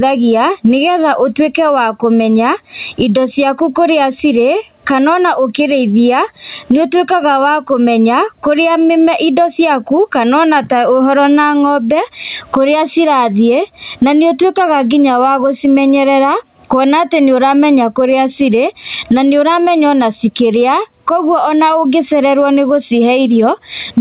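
Through the whole speech clip the level swings by around 15 dB as the gain is pulled down each time a loud sound arrives. Loud and quiet passages sit unnaturally close in level, and the result sounds squashed and breathing. This is gain pumping, likely from the microphone gain being set far too high while a fast limiter or compressor repeatedly pulls the level down on each peak. The call path's band limit at 4 kHz, consistent with a narrowband telephone codec, leaves nothing above 4 kHz.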